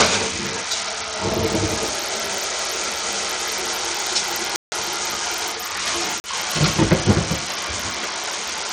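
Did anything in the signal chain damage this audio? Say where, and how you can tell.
Yes. Throughout, the treble is thin and flickers in and out, with a gritty, grainy noise and aliasing riding on the sound. That points to the codec stage, likely Bluetooth SBC compression starved of bits, around 80 kbps, so its upper sub-bands go empty and the rest are coarsely quantised.

Two abrupt dropouts are a block of digital silence: a 160 ms hole from 4.56 to 4.72 s and a shorter 40 ms hole from 6.20 to 6.24 s. The cut to silence with no fade suggests the driver or buffer stage missed filling the output in time.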